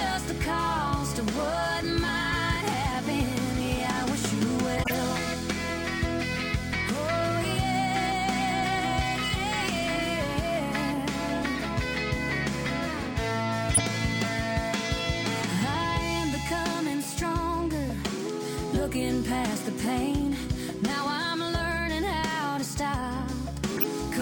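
Four times the decoder played compressed frames whose bits had been flipped, a corrupt frame decoded at 4.77 to 4.94 s, 11.57 to 11.65 s, 13.74 to 13.82 s and 23.76 to 23.84 s. Misread gains and codes push energy into the wrong frequencies for the span of a few damaged frames, so each event is a brief chirpy burst of noise. The first is the longest, peaking around -15 dBFS; the last two are loudest, near -10 dBFS.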